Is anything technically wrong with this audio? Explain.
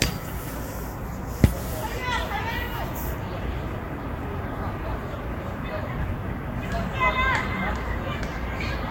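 Yes. Throughout the clip this sound shows generation loss. Its texture is more swirly, smeared and hollow than a single lossy pass would leave, and transients have lost their edges. This is likely from re-encoding around four times with a codec whose character fits Vorbis near 63 kbit/s. Each pass requantises on a shifted frame grid, so the damage compounds. A spectrogram would show a hard ceiling at 16.6 kHz, flickering holes across the upper bands, and onsets smeared in time.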